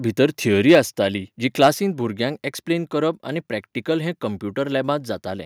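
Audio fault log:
0.69–0.79 s and 1.62–1.68 s, microphone overload: the loudest peaks are flattened, giving those syllables a harsh, crackling edge. Peaks run about 6 dB and about 4 dB past full scale, with a few percent of samples squared off, likely from input volume set too high for the converter.
0.75 s and 1.74 s, microphone volume stepped down: voice and background drop abruptly, first by 2 dB and then by 3 dB, each step landing during or just after a distorted peak. This likely reflects call software detecting clipping and cutting the device's input gain in a single step.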